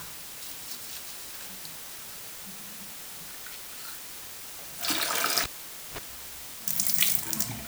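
Low bit depth with dither runs throughout. The sound is rounded to about 7 bits with dither added, leaving a constant, even hiss only roughly 10 dB below the signal.

Cable pulled and plugged in, from 5.43 to 5.98 s: a pop, half a second of near silence, a 46 ms burst of 50 Hz mains buzz, then another pop.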